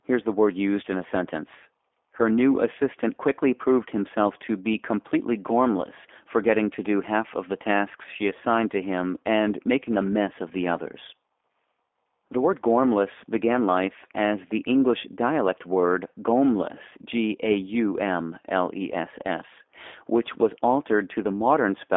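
Throughout, the G.729 codec audibly damages the speech: its 8 kbit/s-style pulse-and-filter resynthesis leaves a rough, synthetic edge, with the band confined to roughly 250 Hz to 3.6 kHz.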